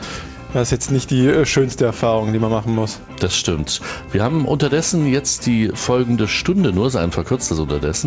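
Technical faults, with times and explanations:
Nothing stood out as a technical problem on listening.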